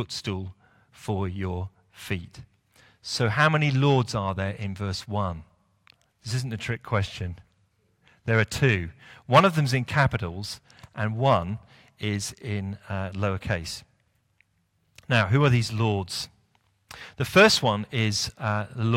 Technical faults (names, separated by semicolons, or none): none